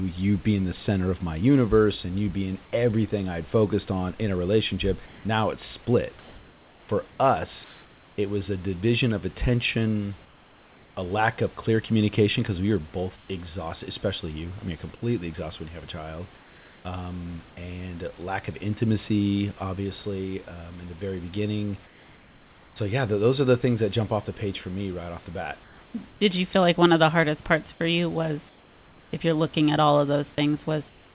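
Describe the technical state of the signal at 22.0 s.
At 22.0 s you're inside a stretch of comfort noise in place of the background, running from about 21.86 to 22.76 s, so roughly 0.9 s. The real room noise, sitting about 29 dB under the speech, gives way to a flat, featureless hiss about 3 dB quieter. The likely cause is discontinuous transmission: the sender went quiet during the pause and the receiver filled in synthetic noise, consistent with RFC 3389-style generation, still band-limited below 4 kHz like the rest of the call.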